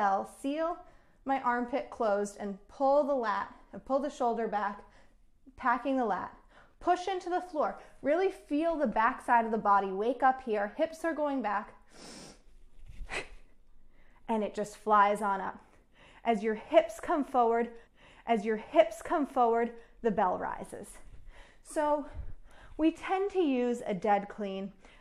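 At 17.86 s a stretch of audio jumps back with a small blip and plays again, ending at 19.88 s. This is a stream segment repeated: the player queued the same 2.02 s segment twice.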